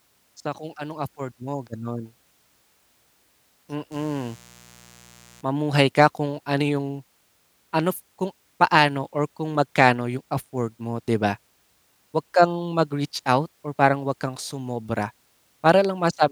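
From 3.91 to 5.41 s, a mains buzz cuts in. Sharp switching spikes, likely from a dimmer, rectifier or unshielded cable, leaked in twice per 60 Hz cycle. Their harmonics climb into the kilohertz range. It sounds raspy and steady, roughly 30 dB under the speech.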